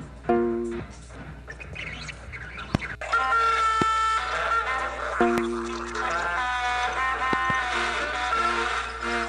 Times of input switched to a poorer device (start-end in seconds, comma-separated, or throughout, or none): none